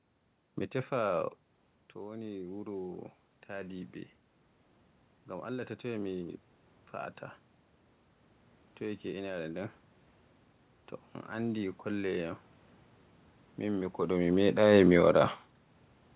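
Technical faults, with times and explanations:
1.99–3.99 s, automatic gain rising: the input dropped about 13 dB, so the AGC ramped its gain up about 6 dB, swelling voice and room noise together.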